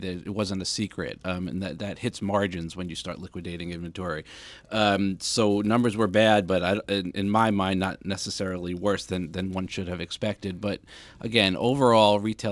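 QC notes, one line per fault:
Throughout: resampler restarted on every block. A rasping buzz at 100 Hz rides on the speech, as the converter started fresh on each 10 ms block and left a small error at every block edge, apparently on a halving of the sample rate. Unlike a 100 Hz mains hum, which carries on steadily through the gaps, this buzz comes and goes with the speech and vanishes in the pauses, because the edge errors exist only where there is signal.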